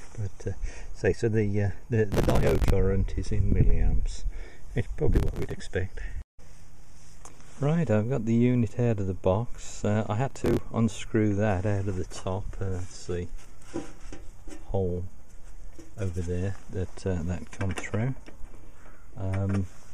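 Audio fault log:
2.12–2.70 s, 5.14–5.61 s, 10.30–10.61 s: processor overload crackle, gritty tearing bursts as the overloaded processor misses dozens of roughly 5 ms buffers over a short stretch, skipping each one.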